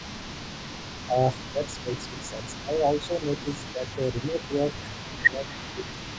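Echo leak runs from 0.00 to 6.19 s. Throughout the recording, a faint delayed copy of the voice trails the speech by about 0.2 s, sitting well below the main talker at roughly 20 dB down. The likely cause is a loudspeaker on the far side feeding its microphone, with that end's echo canceller leaving part of the returned signal in place and sending it back.

Speech suppressed in double talk affects the stretch from 1.06 to 5.91 s. Over a total of roughly three seconds within that window, the talker's voice dips and partly drops out while the other party is also speaking, falling by up to around 10 dB at its deepest. The echo canceller, likely unable to separate the near talker from the loudspeaker echo, turns both down together. The result is an intermittent, dipping quality in that section.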